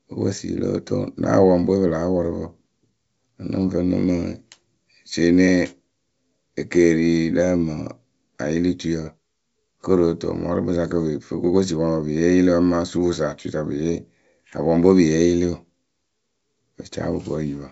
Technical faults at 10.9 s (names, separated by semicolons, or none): none